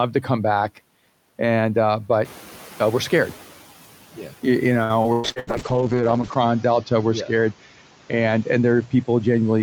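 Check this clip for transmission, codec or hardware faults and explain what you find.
Three faults stand out in this speech clip.

Noise suppressor catching up, 2.24 to 3.47 s: after the room noise jumps by about 11 dB near 2 s, the suppressor's estimate lags for 1.23 s, so the noise leaks through before sinking by about 7 dB.

Repeated packet loss (robotic sound), 4.83 to 5.50 s: five gaps in quick succession, the longest 113 ms, are patched by extending the preceding sound. Nearly half the stretch is concealed, giving choppy speech.

Call bitrate drop, 5.26 s to the end: the encoder is starved of bits, which fits a fall from around 64 kbps to about 7 kbps, lowest for about 1.1 s. The audio bandwidth shrinks from 20 kHz to 8 kHz, leaving the speech muffled and rough.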